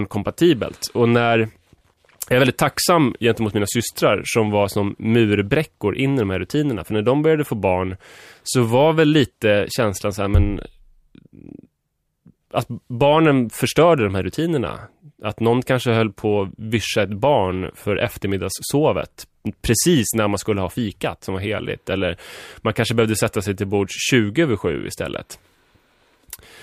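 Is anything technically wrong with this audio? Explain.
No, nothing is technically wrong with this audio. Nothing in the speech recording points to a problem anywhere in its capture or playback.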